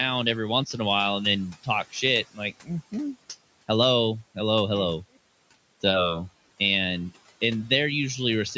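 Speech recorded through a call's microphone processing, with nothing above 8 kHz and room noise sitting about 22 dB below the voice, has one fault: speech cut by the noise suppressor between 2.24 and 2.7 s. The suppressor mistook parts of the speech for background and pulled them down with it, by as much as about 18 dB, so roughly a fifth of a second of sound comes out swallowed and faint. On a waveform the envelope sags within that span. On a spectrogram, the energy there thins to patchy gaps before returning at full level.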